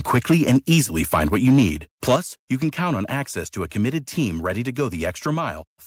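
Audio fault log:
0.14 to 0.80 s, 1.13 to 1.64 s and 2.08 to 2.16 s, microphone overload: the loudest stretches of speech turn harsh and crackly, with peaks pushed about 5 dB past the converter's limit in the first burst and about 3 dB in the other two. Their tops are flattened, a few percent of samples early on, closer to a tenth in the short burst ending just before "you can count on". The likely cause is input gain set too high for the converter.
2.16 s, microphone volume stepped down: right after that last distorted burst, voice and background drop together by about 7 dB in one abrupt step, just as "you can count on" begins. Because everything falls at once rather than fading, it sounds like the input level itself being cut. The likely cause is call software detecting the overload and lowering the device's input volume.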